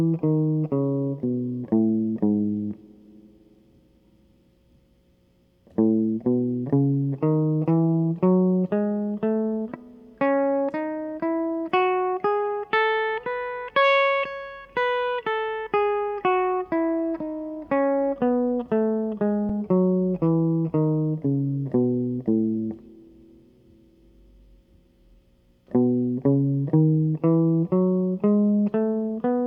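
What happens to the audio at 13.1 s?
Nothing goes wrong at 13.1 s; the music plays through that moment intact, with no dropout, click, glitch or other fault.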